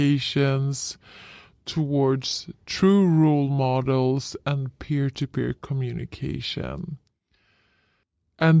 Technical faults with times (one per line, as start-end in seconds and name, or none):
0.00-8.60 wrong sample rate